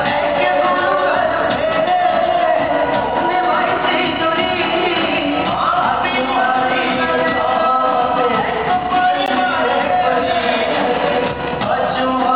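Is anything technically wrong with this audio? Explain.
Yes, there's one glitch. At about 9.26 s you get a gap between stream segments: two 4-second chunks don't quite butt up in their timestamps, so the player pads roughly 15 ms of silence, a short hard-edged dropout, though nothing's actually missing.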